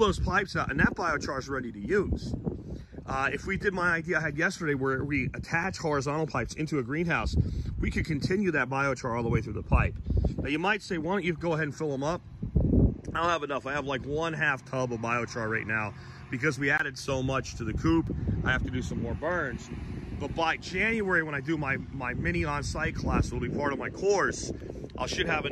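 At 5.64 s, 16.78 to 16.8 s, and 18.07 s, the audio hits a block of digital silence. The sound cuts out with no fade. The 5 ms gaps sound like ticks. The 20 ms gap is a brief hole.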